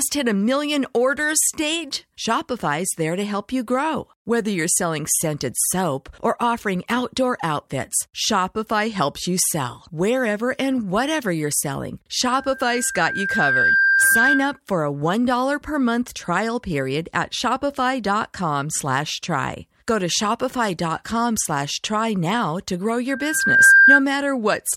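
Loudspeaker feedback squeal appears after "and whatever you're selling", from 12.27 to 14.60 s, then again after "try now to grow", from 23.09 to 24.03 s. Both times a single 1.6 kHz tone swells up, over roughly a second and a half at first and about half a second later, as the microphone re-amplifies its own loudspeaker. It peaks a few dB, then about 10 dB, above the speech. That gradual swell separates it from a steady interference whistle.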